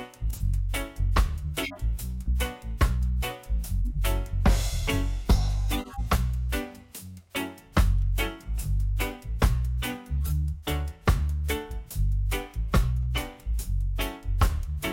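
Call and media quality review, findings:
Corrupt frame decoded: short chirps and noise bursts at 0.33–0.41, 1.63–1.79, 3.82–3.98, 5.73–6.00 and 10.25–10.31 s, peaking at about -20 to -25 dBFS. Decoder playing bit-damaged frames, so misread gains and codes put energy at the wrong frequencies for a few frames each. These are added spurious energy, not the muted or smeared gaps of loss concealment.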